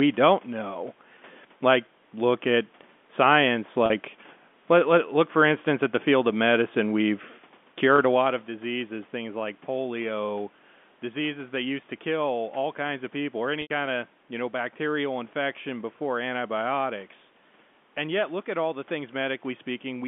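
A speech clip with packet loss with pitch repetition: gaps at 3.86–3.90 s after "look at science" (40 ms), 7.96–7.98 s before "a lot of diseases" (20 ms) and 13.62–13.70 s before "of you know bacterial" (80 ms) are each filled by a repeated pitch period that fades out. The two shorter gaps sound briefly buzzy and held, while the 80 ms one fades into silence before the speech returns, and on a spectrogram the repeated stretches show as frozen, flat harmonics.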